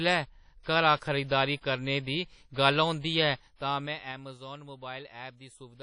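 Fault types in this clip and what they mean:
WMA compression: plainly audible washy ringing and hiss that breathe with the speech, nothing above 10.1 kHz, likely a WMA encode near 32 kbps; unlike simple filtering, the noise tracks the signal.
zipper noise: from 3.23 to 4.41 s the level falls about 15 dB in 3 dB steps, roughly four per second, each ticking; unlike dropouts, the sound never breaks.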